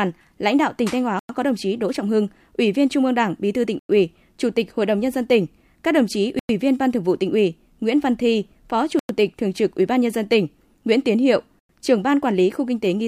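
The speech drops out into hard-edged holes of silence at 1.19–1.29 s, 3.79–3.89 s, 6.39–6.49 s, 8.99–9.09 s and 11.59–11.69 s, each 100 ms long and returning every 2.6 s like a steady stutter. This is a gap between chunks: the audio arrived in 2.5 s pieces, and silence was inserted at every join, so nothing is missing, but the flow breaks at each seam.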